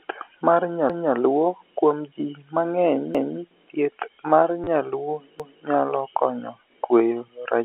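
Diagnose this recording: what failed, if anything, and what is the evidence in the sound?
At three points the speech stutters: a quarter-second of sound plays twice, at 0.90 to 1.15 s, at 3.15 to 3.40 s just before "thieth mar nyaluo nyalo", and at 5.40 to 5.65 s between "thieth mar nyaluo" and "nyalo konyo kweyo". The joins fall every 2.25 s. These are overlapping chunks at the buffer or processing stage. Audio is handled in 2 s blocks, and each block begins 250 ms before the previous one ended, so that 250 ms is replayed at every join.

From 4.64 to 4.67 s, between "thieth mar" and "nyaluo nyalo konyo kweyo", a brief robotic buzz replaces 30 ms of the speech, heard through the narrowband telephone sound of the G.711 line. This is packet loss with last packet repeated, a network fault. The receiver filled the gap by replaying the last packet that arrived until new audio came. The 30 ms gap fits three lost 10 ms packets.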